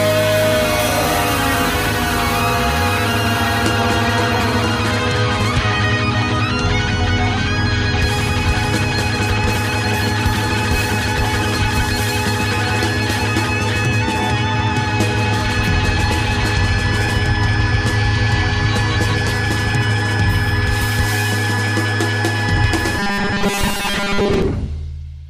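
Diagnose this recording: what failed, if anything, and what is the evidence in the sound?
At the driver or buffer stage, new audio is likely arriving too seldom, so the playback side keeps re-sending its last short block while real audio is skipped. From 22.99 s to 24.42 s the sound turns into robotic sound from repeated short buffers, a rigid metallic buzz fixed at 200 Hz, which fits a repeated block of about 5 ms. About 70% of that stretch is repetition rather than new material, so the sound only loosely follows its original shape.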